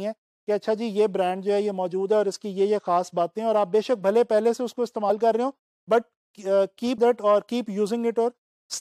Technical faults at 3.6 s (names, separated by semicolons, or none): none